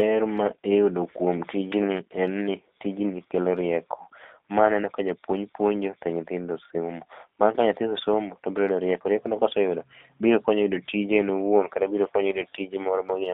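G.729 codec damage runs through the whole clip. The speech is confined to a telephone band of 300 Hz to 3.5 kHz and sounds rough and synthetic. That fits an 8 kbit/s G.729A encoder rebuilding each frame from a vocal tract filter, pitch prediction and sparse pulses.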